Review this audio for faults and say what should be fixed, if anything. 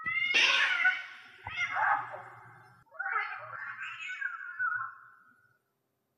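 Whole compressed frames were lost in the file or rejected by the decoder as damaged, so playback skips straight past them. These compressed frames skipped cause two forward jumps: at 0.34 s, roughly 150 ms of audio vanishes, and at 3.55 s, roughly 70 ms. Both gaps fit whole multiples of a 24 ms frame. Prevent this by verifying file integrity after transfer and re-encoding from an intact source.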